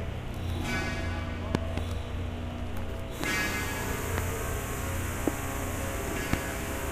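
An everyday sound recording with loud pops. Two come in quick succession between 1.55 and 1.80 s. Single pops follow at 3.24, 4.18, 5.28 and 6.33 s. Each peaks around 20 dB above the sound, which carries on underneath. The likely cause is a voltage pulse from static, a switch or a driver glitch.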